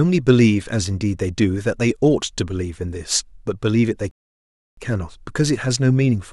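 A speech clip with a rebuffering stall from 4.11 s to 4.77 s: playback ran dry, fell silent, then resumed exactly where it stopped, adding 0.66 s with nothing lost. The waveform shows a dead-flat line there, and the spectrogram a clean blank vertical band.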